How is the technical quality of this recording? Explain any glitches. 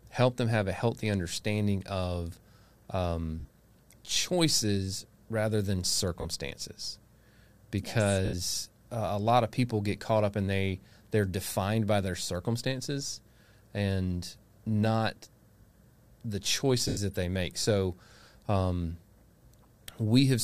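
The recording has four short gaps of lost LE Audio frames. The light lossy compression on the speech is barely audible.

Lost LE Audio frames occur at 3.40–3.48 s (just before "choices rather than", about 70 ms lost in scattered runs over 80 ms, longest roughly 50 ms), at 6.21–6.25 s (right after "choices rather than", 40 ms), at 8.25–8.34 s (80 ms), and at 16.88–16.98 s (90 ms, just before "that they make so"). Each loss fits a run of 10 ms frames. The LC3 decoder conceals the missing frames by repeating the last spectrum with scrambled signs, so the voice becomes a brief noisy smear that fades rather than a clean silent gap. That smear is what separates these losses from a simple dropout.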